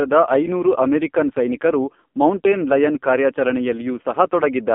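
Speech passed through the AMR narrowband mobile codec for its whole length. The coder keeps only about 200 Hz to 3.5 kHz and rebuilds the voice from a vocal-tract model, leaving heavy damage: a muffled, buzzy, synthetic tone that fits a low rate near 6 kbps.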